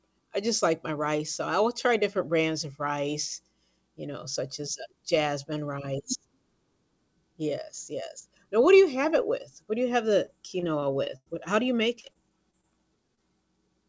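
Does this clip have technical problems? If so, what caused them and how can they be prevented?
Yes. From 10.26 to 11.28 s, and again from 12.00 to 12.65 s, the speech turns choppy and robotic, with short pieces missing. This is repeated packet loss (robotic sound). Over each stretch a string of holes, the longest about 97 ms in the first, was patched by stretching the last sound, totalling roughly 180 ms and 110 ms of substitute audio. The second stretch has shorter holes. A steadier network path, forward error correction or a deeper jitter buffer would prevent it.

At 13.15 to 13.19 s there is a brief smear where the sound wobbles for an instant. This is short concealed packet loss. About 20 ms never arrived in time, so the receiver continued the preceding sound to fill the gap and then blended back into the real audio. A fragment this short can swallow a consonant. Reducing network congestion or adding redundancy in the stream would prevent it.

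The call codec's band limit can also be heard, with nothing above 8 kHz, which fits G.722.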